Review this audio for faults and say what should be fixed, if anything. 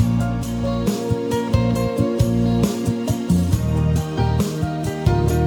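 Imaging from linear upsampling throughout: straight-line interpolation, consistent with 24 kHz to 48 kHz, dulls the top end and leaves a mirror image from 12 to 24 kHz, roughly 30 dB down. Resample with a proper windowed-sinc or polyphase anti-imaging filter instead.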